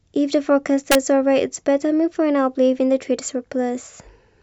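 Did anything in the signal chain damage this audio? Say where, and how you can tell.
Yes. Integer overflow in a fixed-point gain or sample-format conversion stage is audible from 0.92 to 0.95 s as a harsh crack on the speech peak. The level was pushed about 2 dB past full scale and wrapped to the opposite extreme instead of being clamped.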